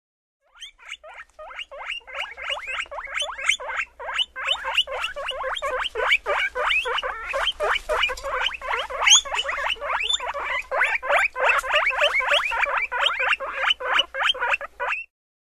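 At 7.94 s, then 14.38 to 14.40 s, damaged data in a compressed stream causes brief blips. Corrupted frames confuse the decoder. It loses sync and recovers.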